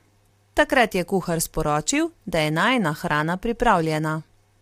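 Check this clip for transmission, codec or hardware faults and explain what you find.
One codec fault runs through the whole speech clip. Low-delay AAC compression, likely AAC-ELD at a rate that fits about 32 kbps: its short frames blur pitch harmonics, so the voice turns rough and grainy, with noise between harmonics rather than ordinary AAC's swirling pre-echo.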